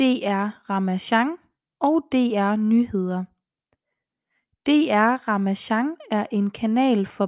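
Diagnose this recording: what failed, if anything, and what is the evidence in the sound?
No fault is audible here.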